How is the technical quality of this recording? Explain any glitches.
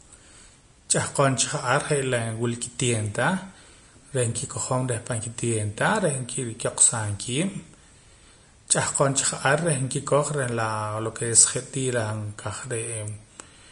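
The speech carries plainly audible codec damage from start to finish. Throughout, the treble turns hissy and grainy, consonant onsets blur, and tones sound roughened. The likely cause is Vorbis compression at a low setting, fitting a bitrate near 35 kbps: fine high-frequency detail is quantised so coarsely that it becomes noise of similar energy. Unlike steady background hiss, this graininess rises and falls with the speech.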